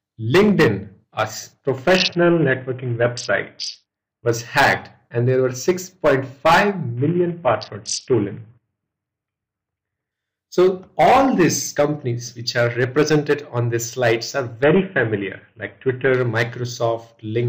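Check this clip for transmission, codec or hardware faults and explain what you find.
There's a recurring Bluetooth SBC bit pool drop, three times: 1.97 to 4.28 s, 6.97 to 10.12 s, and 14.64 to 16.14 s. Each time the link seems to get congested and the sender cuts the bit pool hard, which fits a fall from around 31 to about 5, roughly 50 kbps. With so few bits the top sub-bands get starved and everything else is coarsely quantised, so the treble goes dull and a gritty noise comes up until the rate recovers.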